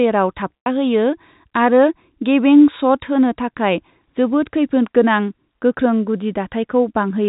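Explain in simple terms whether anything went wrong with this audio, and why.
Packet loss with pitch repetition occurs from 0.59 to 0.66 s. About 90 ms of audio went missing in transit, and the receiver covered the hole by repeating the last short stretch of voice, then fading it, so the speech briefly sounds held and buzzy through the telephone-quality sound.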